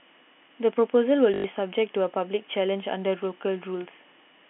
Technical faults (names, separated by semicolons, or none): packet loss with last packet repeated